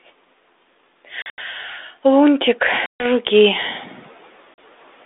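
From 1.22 to 1.38 s, packet loss on an ADPCM call cuts 120 ms of speech into silent holes, the longest 80 ms. It happens again from 2.86 to 3.06 s, losing 140 ms, and at 4.54 s for 40 ms. After each hard-edged gap the decoder's predictor and step size no longer match the sender's. The speech comes back slightly distorted for a brief moment.

Around 3.5 s the room noise jumps by about 16 dB. From 3.32 to 3.89 s the noise suppressor is catching up. Its noise estimate lags, so the noise first comes through with less reduction. It then sinks by about 7 dB over 570 ms. The light G.726 ADPCM coding, which fits 32 kbit/s, keeps the band to 300 Hz to 3.6 kHz.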